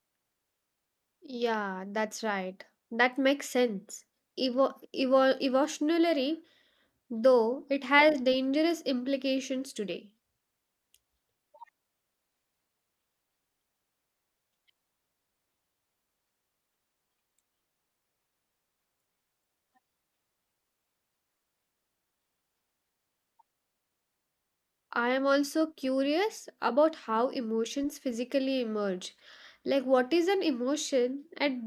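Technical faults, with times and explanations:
Nothing technical stands out in this speech recording, so there's no fault to list here.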